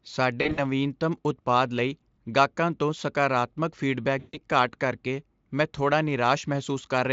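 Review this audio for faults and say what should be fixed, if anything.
VoIP packet loss concealed by the speech codec occurs at 0.41 to 0.60 s and at 4.19 to 4.38 s. At each gap the decoder extends its last pitch and filter and lowers the gain, so the speech turns into a fading buzz or coloured noise. In the first event the losses are scattered over about 160 ms, with the longest gap 40 ms. The second is about 140 ms of loss. The gap lengths fit a stream sent in 20 ms frames. On a spectrogram, each event shows repeated, smeared harmonics that lose energy over time. The waveform shows a decaying envelope that is too regular, and it stays weak for a short time after real audio returns. The Speex stream at 34 kbps is clear outside these points. Adding forward error correction or packet redundancy, along with a larger jitter buffer, would prevent the gaps.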